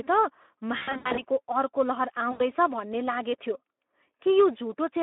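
The whole clip passes through the Speex codec at a low setting, consistent with roughly 11 kbps, over a line limited to 250 Hz to 3.5 kHz. Too few bits for the excitation leave the speech plainly hoarse, noisy and thin. From 0.77 to 1.23 s, VoIP packet loss concealed by the speech codec: about 260 ms of lost packets are scattered over 400 ms, with runs of up to 80 ms. The decoder keeps extrapolating its last pitch and filter at falling gain, so the speech smears into a fading buzz or coloured noise. A second loss of 80 ms at 2.31 s, just before "भन्ने लागेथ्यो", leaves a brief fade before that phrase returns.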